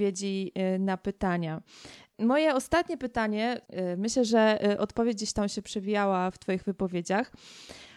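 Recorded speech with no technical fault audible anywhere in the signal.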